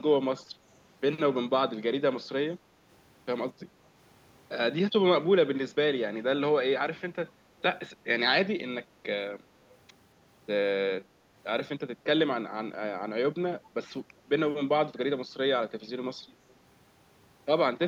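Speech with a brief echo leak from 16.49 to 16.53 s. A very faint copy of the voice returns about 234 ms late, lasting only a scrap. The likely cause is a far-end loudspeaker whose echo canceller let some of its microphone pickup back through.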